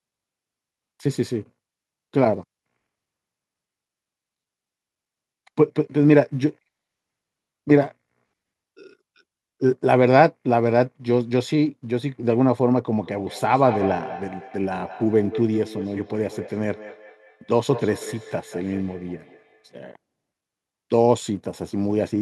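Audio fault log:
13.0–19.8 s, feedback echo between two devices: the speech returns as a repeat roughly a fifth of a second behind itself, peaking about 14 dB below the direct level and sounding thinner and more ringing than the original. A second device in the same room is on the call and plays back what this microphone sent. The microphone picks that playback up again, and its echo canceller only suppresses sound from its own loudspeaker, so the loop passes through.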